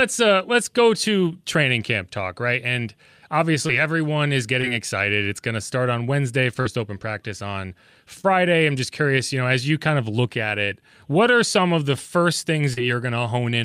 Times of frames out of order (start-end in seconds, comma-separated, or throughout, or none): none